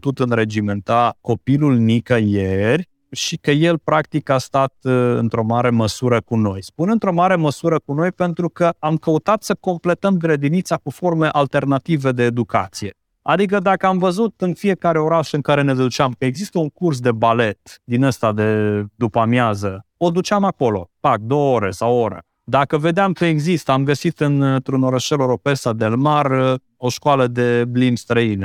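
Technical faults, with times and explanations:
No technical faults can be heard in this speech recording. There is nothing here that calls for a time or an explanation.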